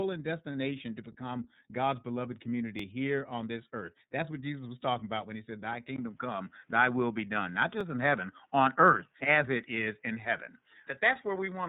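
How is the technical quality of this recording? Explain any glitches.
The recording is narrowband, coded speech with two brief stutters and an abrupt change in sound partway through.

iLBC codec, throughout: the speech was coded with iLBC in 30 ms frames at 13.33 kbps, each frame modelled independently. Nothing above 3.8 kHz survives, so the speech sounds band-limited, and the coding roughness is plainly audible as a slightly synthetic grain.

Overlapping chunks, at 2.79 s and 7.81 s: the audio was handled in 5-second chunks, each starting before the previous one finished. About 12 ms replays at each join, heard as a small click or stutter, the first just before "here on this earth".

Input switched to a poorer device, from 5.96 s to the end: after a 20 ms gap, the tone changes, the level shifts by about 5 dB, and a faint new background noise appears roughly 45 dB below the speech. The likely cause is a change to a different, lower-quality input device mid-recording.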